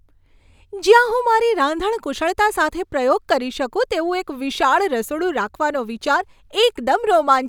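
No technical faults can be heard anywhere in the speech.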